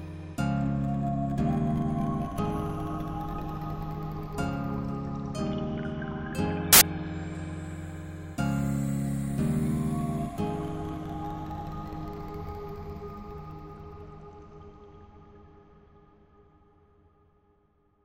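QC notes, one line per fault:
6.73–6.81 s, samples built from the wrong bytes: byte order or alignment slips, so the low bits dominate each value, giving a loud burst of harsh broadband noise.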